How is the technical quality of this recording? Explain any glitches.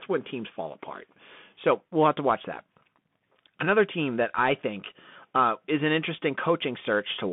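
The recording is held back by a narrowband Bluetooth CVSD headset codec throughout the speech. Everything passes through a band of about 150 Hz to 3.5 kHz, so the voice sounds boxed-in and telephone-like, and the coding damage is plainly audible. CVSD sends one up-or-down bit per sample at a rate that fits 64 kbps, letting its step size adapt. Sharp, loud high content outruns that step, so s sounds turn scratchy over a granular hiss. That hiss and slope distortion set it apart from a simple band-limited phone line.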